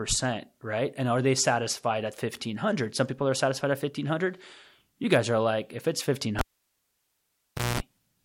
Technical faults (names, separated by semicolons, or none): cable pulled and plugged in